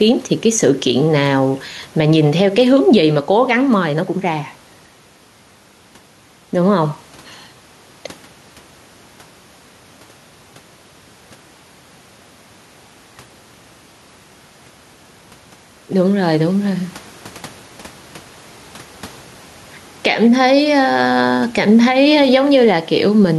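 Throughout the speech, with room background about 33 dB below the voice, the level ducks by roughly 5 dB under louder syllables, leaving the level squashed. This gain pumping likely comes from input gain set too high, with a fast limiter clamping down on every peak.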